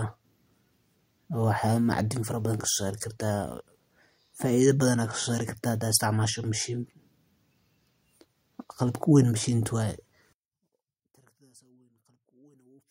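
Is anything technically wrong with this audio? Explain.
Yes. From 10.33 s to the end of the clip, the speech abruptly drops by about 38 dB to a faint remnant. The likely cause is one channel inverted: reversed polarity on one side cancels the shared centre content when summed. The waveform collapses to a near-flat trace, and the spectrogram goes almost empty.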